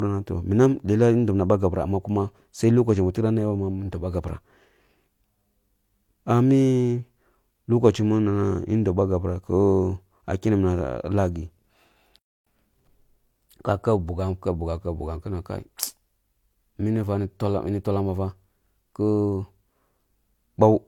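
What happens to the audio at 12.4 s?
At 12.4 s the speech is in a playback stall: output goes silent from 12.19 to 12.47 s, about 280 ms, likely because the player ran out of data, then resumes. Transcoding between lossy codecs is also present throughout: layered artefacts with nothing above 18.5 kHz, consistent with an MP3 stage re-encoded to low-rate HE-AAC.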